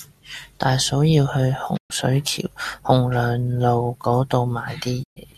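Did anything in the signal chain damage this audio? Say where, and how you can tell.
Yes, a digital broadcast dropout at the receiver: speech fades over 20 ms to silence at 1.76–1.92 s, between "大嫂要去" and "水橋洪", and at 5.02–5.18 s. Each blank spectrogram gap, with the loss near 120 ms, fits about five rejected frames muted.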